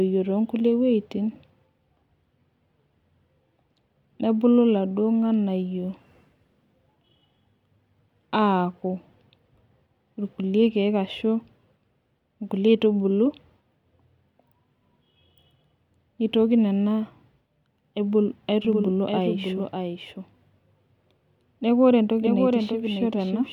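From 18.65 s to the end, the speech is likely captured a second time through a slower path, creating a doubled audio track. A full-band copy trails the original by roughly 0.7 s, about 5 dB quieter, dry, and starts abruptly.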